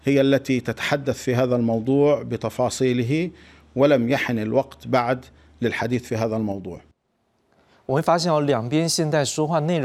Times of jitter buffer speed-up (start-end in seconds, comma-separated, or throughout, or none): none